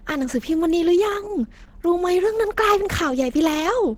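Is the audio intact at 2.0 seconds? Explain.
No. Opus compression affects the whole clip, including 2.0 seconds. At this point the speech has a hoarse, muffled and grainy texture. That texture is most likely caused by the encoder running in its hybrid mode, which codes the lower band with its speech model and patches the upper band with coarse band energies. The audible coarseness points to a low rate of around 16 kbps. Full bandwidth survives to about 20.2 kHz, so the damage is roughness rather than dullness.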